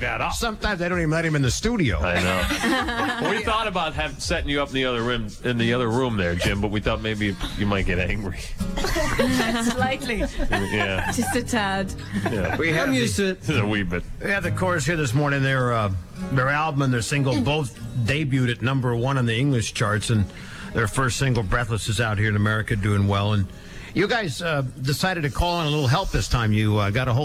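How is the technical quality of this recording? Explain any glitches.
Nothing here needs explaining, since the recording runs without a single glitch anywhere along the way.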